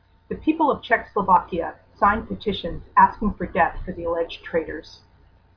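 No technical faults can be heard anywhere in the recording.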